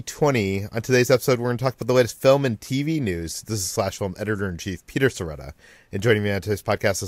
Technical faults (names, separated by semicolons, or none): none